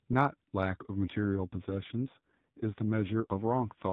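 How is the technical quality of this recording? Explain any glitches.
The speech is band-limited throughout, with nothing above 4 kHz, as expected from an AMR narrowband mobile codec link. From 1.06 s to the end of the clip there is an AMR rate drop. The voice turns rougher, buzzier and more synthetic, with no gap and no change in bandwidth. A weak radio link makes the network switch the codec to a lower mode and spend the freed bits on error protection. The degradation fits a fall from 12.2 to 5.9 kbps, leaving the vocal-tract model with far fewer pulses to describe each frame.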